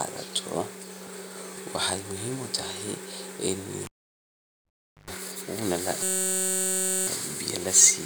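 At 3.85 s the speech is cut by a cable pulled and plugged in. A pop opens about 1.2 s of near silence, then roughly 110 ms of 50 Hz mains buzz as the plug's tip makes contact, and a second pop at 5.10 s as the sound returns. The buzz and paired pops set it apart from a plain dropout.

From 6.03 to 7.07 s a system hang loop replaces the speech. One 5.33 ms slice, which fits a 256-sample buffer, repeats exactly at 188 Hz, giving a steady pitched buzz instead of stutter. Its pitch sits well above 50 Hz mains hum.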